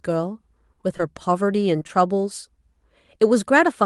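A speech recording carried over a call path whose band stops near 12 kHz. It has short concealed packet loss at 0.97 to 1.01 s, then three back-to-back gaps from 1.79 to 1.91 s. Each gap lost about 20 ms. The receiver patched them by extending the preceding sound, heard as brief smears.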